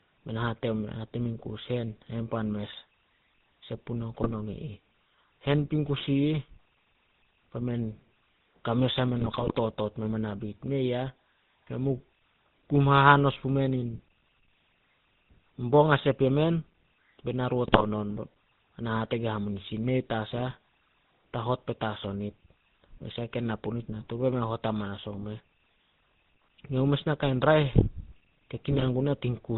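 GSM full-rate codec damage runs throughout: the speech is rebuilt from a vocal-tract filter and sparse pulses, cut off at 4 kHz, giving a plainly buzzy, gravelly texture that fits 13 kbps full-rate coding. GSM bit errors strike at 4.21–4.33 s, 9.17–9.56 s, 17.67–17.85 s and 28.71–28.88 s, where corrupted filter, pitch and gain values make the speech squawk, pop and gargle.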